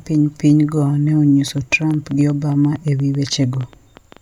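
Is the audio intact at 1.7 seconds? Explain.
No. At 1.7 seconds the speech sits inside a train of clicks that runs from 1.48 to 4.18 s. Short pulses of much the same shape land on the audio about 8.2 times a second, at an uneven pace. There are around twenty in all. They peak at roughly the level of the speech itself. The cause is likely electrical interference or a faulty connection or power supply. It is heard as irregular ticking over the speech, and in its pauses too.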